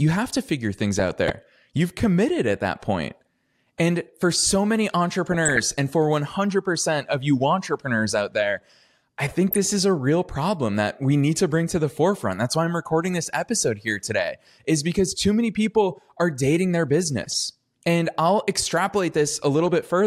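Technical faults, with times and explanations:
0.99–1.32 s (after "have to figure things"), 5.26–5.60 s, 9.49–9.68 s (between "entrepreneurs out there I" and "is a real problem"), 17.24–17.34 s (after "people are dating their"): DAB burbling. Weak reception let bit errors through into the audio data, corrupting sub-band levels frame by frame, so short blips of noise and sudden level jumps break into the speech.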